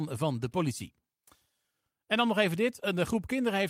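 Speech clip with no audible technical faults.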